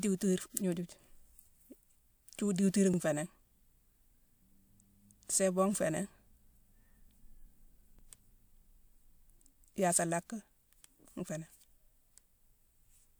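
The speech was handled in overlapping chunks about 5 seconds long, each starting 50 ms before the previous one finished. That 50 ms slice plays twice at each join, from 2.94 to 2.99 s and from 7.99 to 8.04 s, heard as a brief stutter or click.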